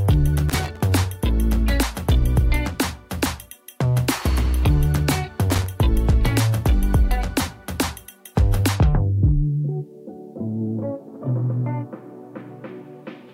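An irregular burst of scratchy crackle breaks up the sound from 0.49 to 0.81 s, and a shorter one follows from 5.50 to 5.66 s. This is loose connector crackle: a worn or dirty contact rapidly making and breaking, chopping the signal into ragged fragments.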